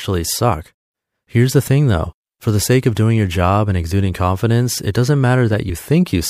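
A brief smeared blip at 2.03 s in this speech clip marks a small forward jump, with roughly 30 ms of sound missing. This is compressed frames skipped: about one frame, fitting a 26.1 ms frame length, was lost or rejected by the decoder, and the overlap between neighbouring frames blurs the join instead of clicking.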